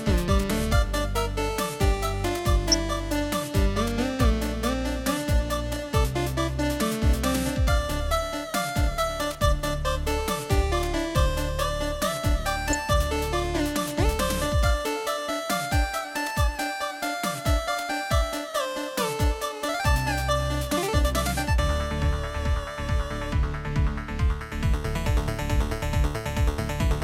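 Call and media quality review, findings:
DAB burbling at 2.72–2.74 s and 12.68–12.75 s. Brief watery blips. Points to a few corrupted MP2 frames. Weak reception, low bit error rate of about 0.1 to 0.15 percent. Residual errors corrupt samples, so single sub-bands get short noise blips.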